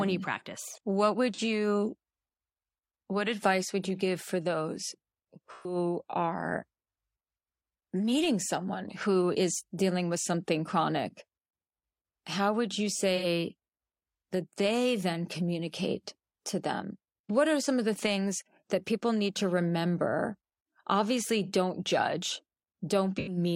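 AAC frame loss with concealment occurs four times: at 1.34 to 1.40 s after "you mm practice what", at 5.52 to 5.75 s after "you give for those", at 13.15 to 13.25 s after "how would you", and at 23.18 to 23.37 s. Each time the decoder loses compressed speech for about 43 to 128 ms and rebuilds it from the last good spectrum, producing a smeared, phasey patch. Unlike a plain dropout, these spots are filled with blurred, noisy sound rather than silence.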